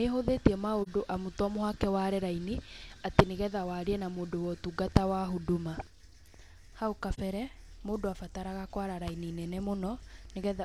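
Speech with AAC frame loss with muting: brief soft-edged dropouts at 0.82 s, just before "amu to", and 7.14 s, each fitting one lost 42.7 ms frame faded out and back.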